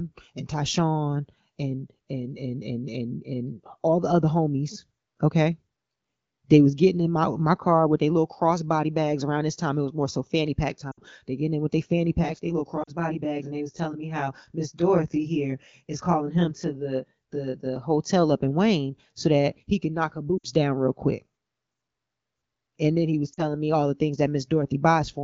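A wideband speech recording with four short dropouts from lost AMR speech frames. At 10.91 s, just after "more so fanny pack", about 60 ms of sound drops to near silence. At 12.83 s a 40 ms gap does the same. At 20.38 s, between "he can knock her" and "down real quick", the gap is 60 ms, and at 23.33 s, between "then he was" and "me all the things", it is 40 ms. These lengths point to runs of two or three 20 ms frames failing their checks. The decoder extends the previous frame's pitch and spectral shape at falling gain, so each gap drops to near silence before the speech resumes. From 12.21 to 17.76 s a channel delay causes comb filtering. One channel runs roughly 20 ms behind the other, and summing them to mono cuts a dense series of notches spaced about 50 Hz apart. That gives the speech a rough, slightly doubled sound across the span, and the 12.83 s frame loss falls inside it.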